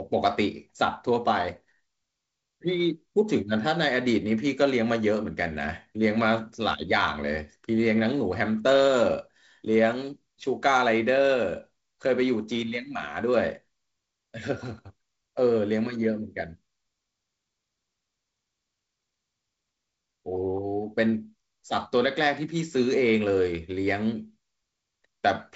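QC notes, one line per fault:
No faults to note; the G.722 wideband telephone coding comes through as expected, with nothing heard above roughly 7.7 kHz.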